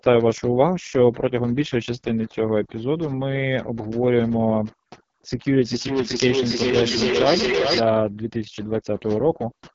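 Right from the start there's overdone noise removal: the background is pushed to near silence with little twinkling specks, and the quieter parts of the speech get eaten too. Across the whole clip you also hear the AMR wideband (HD Voice) codec straining. The speech is rough and raspy, which points to its lowest rate, around 6.6 kbit/s, and nothing sits above 7.6 kHz. Then from 5.55 to 7.9 s there's feedback echo between two devices: the speech comes back roughly every 0.4 s, thinner and ringier, with repeats reaching about the level of the speech itself so they stack up instead of fading.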